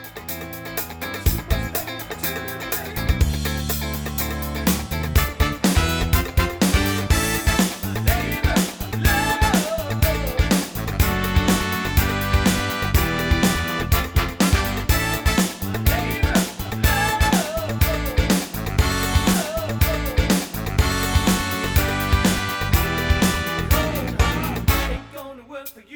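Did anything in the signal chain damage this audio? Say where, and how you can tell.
Yes: from 19.33 to 21.33 s a two-second stretch plays again after a small blip, a stream segment repeated because the player fetched or queued the same segment twice.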